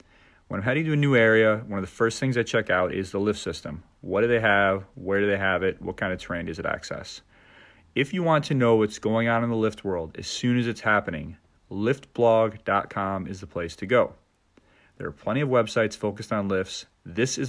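A speech recording with no technical faults to report.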